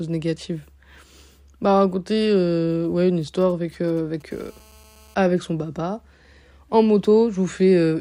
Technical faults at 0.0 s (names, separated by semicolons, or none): none